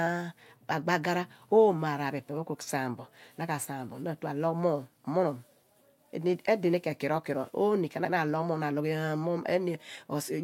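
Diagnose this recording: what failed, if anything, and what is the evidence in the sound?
At 8.05 s the speech stutters: the stretch from 8.05 to 8.14 s plays, then plays a second time, so the listener hears the same tenth of a second twice before the sound moves on. This is repeated frames at the codec or storage stage. A 96 ms block, which fits a run of three compressed frames, was written or delivered twice and decoded faithfully both times. The recording is 96 ms longer than the original because of this duplicated block.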